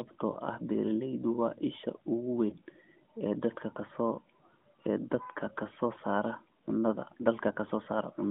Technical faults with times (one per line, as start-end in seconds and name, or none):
0.32-0.38 lost AMR speech frames
2.50-2.56 lost AMR speech frames